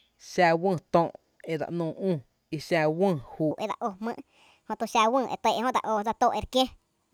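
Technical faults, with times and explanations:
3.51–7.13 s, section at the wrong speed: from 3.51 s to the end, playback likely ran against the wrong clock, at 1.41 times the recorded rate. Speed and pitch rise together, so the speech turns hurried and lifts by about seven semitones, sounding thin and chipmunk-like.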